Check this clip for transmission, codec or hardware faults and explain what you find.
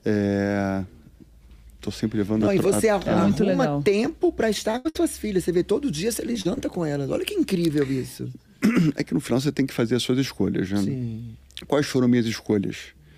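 Packet loss on the transmission path damages the audio in two clusters, around 4.7 to 5.0 s and 6.3 to 6.6 s.

Short concealed packet loss occurs at 4.71 to 4.76 s, 6.33 to 6.37 s, 6.41 to 6.47 s and 6.55 to 6.59 s. Packets arrived too late or not at all, leaving holes of 20 ms, 20 ms, 40 ms and 20 ms. The receiver patched each by extending the preceding sound for about that long, then crossfaded back, so each is heard as a brief smear or wobble.

Bursts of packet loss follow straight after the first short drop, at 4.77 to 4.87 s and 4.89 to 4.97 s. Here consecutive packets were lost, 80 ms in the first burst and 60 ms in the second. Concealment stretched the last received sound across each gap while fading it down, so a held buzz or decaying hiss replaces the real audio. When playback resumes, the material in between is simply gone, giving an audible skip.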